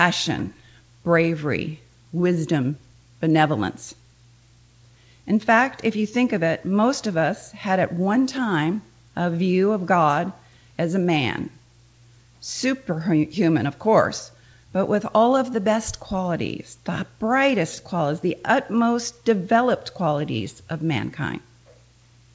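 Nothing here sounds broken; the audio just arrives the way a normal call would, with nothing above 8 kHz, which fits a wideband call codec like G.722.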